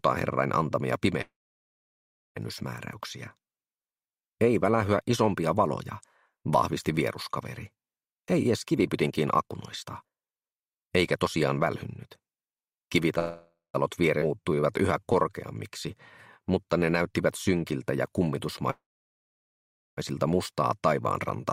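From 1.21 to 2.38 s there is a call audio freeze. The last sound is carried on briefly as a fading buzz, then about 1.04 s of near silence follows before the audio resumes where it stopped. The pause is added time: nothing is lost, and the whole event pushes playback about 1.14 s later. That is what separates it from a skip ahead, which removes material instead of inserting a gap. Packets were likely held up in transit until the jitter buffer ran dry, and the same cause fits the two later freezes.

From 8.07 to 13.12 s comes a jitter buffer speed-up. The receiver trims short pitch-period slices again and again, so the sound runs at about 121% of its normal rate with pitch unchanged. Roughly a second is shaved off over those five seconds, giving a hurried, compressed feel rather than the chipmunk shift a plain faster playback would bring.

At 13.19 to 13.76 s a shorter freeze of about 0.55 s inserts a brief stall, with only about 0.16 s of it actually silent and the rest a decaying continuation of the previous sound.

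At 14.20 to 14.23 s a skip ahead jumps playback forward. Around 0.2 s of audio is discarded and the two sides are joined almost directly, leaving an abrupt splice with no audible pause. That is the opposite of a freeze.

From 14.28 to 16.87 s a jitter buffer slow-down follows. Single pitch periods and bits of pauses are repeated to rebuild the buffer's reserve, adding about 212 ms. The audio plays at about 92% speed with pitch unchanged, so sounds stretch out slightly, sometimes with a faint warble. It mirrors the earlier speed-up.

From 18.71 to 19.99 s the longest freeze inserts about 1.27 s, nearly all of it, about 1.16 s, silence, before playback picks up again without losing anything.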